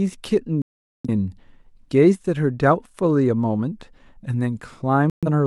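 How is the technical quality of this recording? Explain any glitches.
The speech is interrupted twice by digital broadcast dropout. The first gap runs from 0.62 to 1.09 s, and the second from 5.10 to 5.28 s. The receiver stopped getting usable frames and muted until clean ones returned. The first hole lasts about 0.43 s, which points to roughly ten lost frames. The second lasts about 0.13 s. Each time the sound drops to silence and resumes further on, with the missing speech gone.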